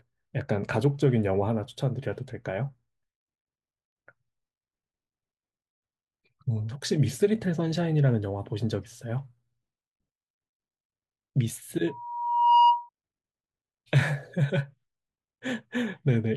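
Speech, with loudspeaker feedback squeal from 11.87 to 12.89 s: a 956 Hz tone swells over under a second to about 10 dB above the speech, as mic-to-speaker loop gain exceeds unity there.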